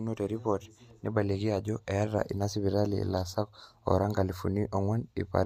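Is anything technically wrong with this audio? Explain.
No, nothing in this speech recording stood out as a technical problem on listening.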